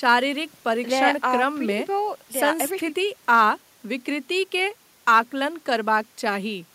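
Nothing stood out on listening to this speech recording.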